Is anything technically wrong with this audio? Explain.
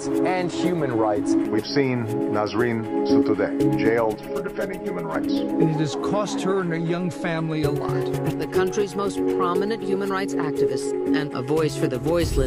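Yes, from about 4.15 to 5.15 s there's channel delay causing comb filtering. One channel runs roughly 5 ms behind the other, and summed to mono the shared content cancels at evenly spaced frequencies starting near 100 Hz, so the sound goes hollow and phasey for that second.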